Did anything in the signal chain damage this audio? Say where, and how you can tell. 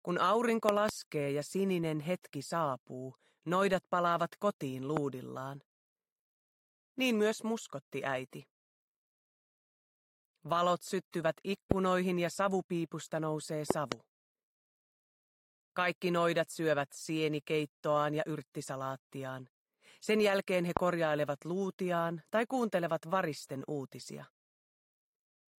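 Yes. The damage looks like loud pops entering on the analogue side, most likely from a connector, switch or static discharge. Sharp pops sit well above the sound, peaking around 20 dB over it, at 4.97–4.99, 11.72–11.74 and 20.77–20.79 s, with double pops at 0.69–0.91 and 13.71–13.94 s. The sound continues unbroken underneath each one, which marks a voltage pulse added to the signal, briefly shaped by the following circuitry, rather than lost data.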